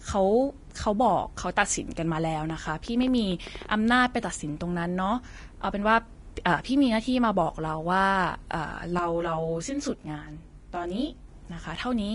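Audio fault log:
Throughout: Vorbis compression. Plainly audible codec damage, with nothing above 10.6 kHz. Coarse treble quantisation makes grainy hiss, which fits a low bitrate near 33 kbps.
2.5 to 3.67 s: train of clicks. Around ten similar pops at about 7.8 per second, irregularly spaced, some 5 dB above the signal. Likely interference or a faulty connection.
8.99 to 11.28 s: channel delay (comb filtering). One channel arrives roughly 20 ms late before mono summing. Notches start near 30 Hz, so the sound turns rough or slightly doubled.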